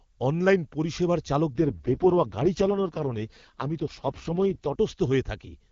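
From 1.54 to 4.76 s, right after "অনলাইন পরিষেবার", the speech turns rough, raspy and synthetic with no gap or loss of bandwidth, then clears. This is an AMR rate drop, where the wideband codec is pushed to its lowest rates, which fits a fall from 23.85 to about 6.6 kbit/s.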